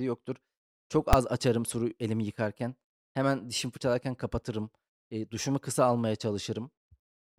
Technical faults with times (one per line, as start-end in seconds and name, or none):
1.13 invalid numbers at full scale